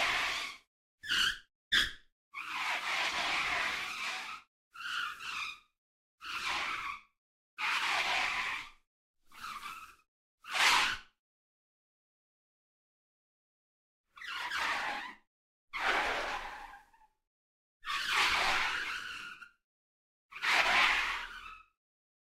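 From 11.44 to 13.98 s the sound cuts out for about 2.5 s, leaving silence, then resumes with that stretch lost. A long network dropout is the likely cause. The waveform goes flat and the spectrogram shows a blank vertical band.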